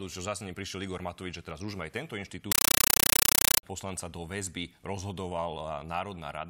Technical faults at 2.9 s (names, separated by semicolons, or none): compressed stream played as audio